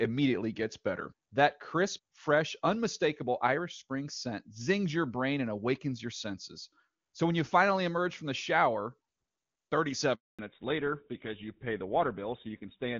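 It's a phone-call speech recording on clean HD Voice, which sounds like AMR-WB near its top rate. At 10.15 s there's a handover gap: the call jumps networks and the voice cuts to silence for about 240 ms, until 10.39 s. Right after, there's a fallback to narrowband. Everything above 4 kHz disappears through to the end, so it goes duller and rougher, which fits an older GSM full-rate codec taking over.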